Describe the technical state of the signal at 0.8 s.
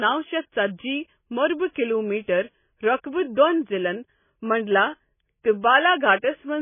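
At 0.8 s the speech carries heavy damage that runs through the whole clip, likely MP3 compression at a rate that fits around 16 kbps. Starved of bits, the encoder cuts everything above 3.5 kHz and drops weak frequency lines frame by frame, giving dull, watery, swirling sound.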